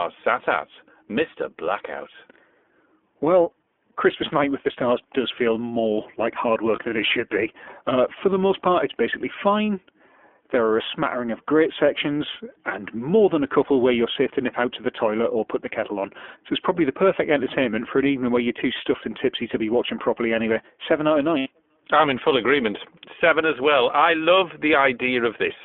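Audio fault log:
throughout: iLBC codec. The speech sounds narrow, slightly rough and synthetic, confined to roughly 250 Hz to 3.4 kHz, which fits iLBC's 15.2 kbps mode coding each frame independently.
6.76 to 6.81 s: lost iLBC frames. After "feel more like hard", a brief buzzy held vowel fills 20 ms, one concealed frame repeating the last pitch cycle, before "than it should be" returns cleanly.
21.38 to 21.48 s: lost iLBC frames. After "out of", a longer breathy, fading hold of 80 ms repeats the last pitch cycle mixed with noise, and then "I'm in full agreement" recovers immediately.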